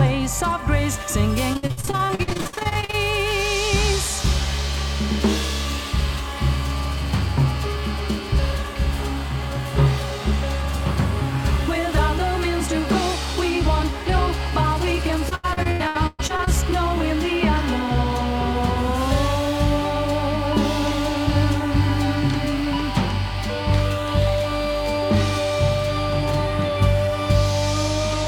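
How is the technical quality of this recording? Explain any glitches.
Two bursts of repeated packet loss (robotic sound) degrade the recording, at 1.53–2.95 s and 15.29–16.49 s. Late or lost packets leave short holes, each patched by extending the previous sound. Nearly half of each stretch is filled this way, with gaps up to 60 ms and then 120 ms, giving choppy, broken-up audio.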